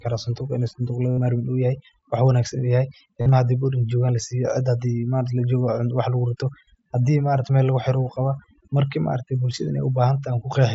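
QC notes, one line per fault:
Throughout: overdone noise removal. The noise reduction was set far too aggressively, so any frequency band that came close to its noise estimate was pulled right down or switched off, and the quieter parts of the speech went with it. The background floor drops and breaks up into twinkling specks, and the speech has its soft edges eaten away.
1.11 to 1.18 s and 3.21 to 3.32 s: concealed Bluetooth headset packet loss. Speech packets from the headset were lost, and the receiver filled each gap by repeating the best-matching piece of the last 20 ms or so of waveform. In the first gap, about 68 ms of missing audio, which fits roughly nine lost frames, becomes a buzzy tone held at full level, then a slight warble as real speech resumes. The second loses a similar amount, spread over about 105 ms with a longest unbroken stretch of 45 ms, so the buzz comes in patches rather than as one steady tone. 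The mSBC headset link itself adds only light graininess.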